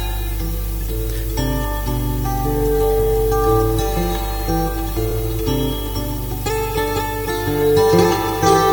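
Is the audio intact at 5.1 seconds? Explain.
No, there's a short repeated-frames glitch from about 5.10 to 5.12 s. A 23.2 ms chunk, which fits a single compressed frame, gets played twice back to back, so the decoder replays the same sliver of sound. You hear a quick stutter, and the clip runs 23.2 ms longer from that point on.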